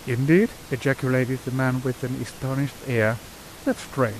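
Nothing stood out on listening to this speech, with only the room's own background noise sitting about 19 dB beneath it.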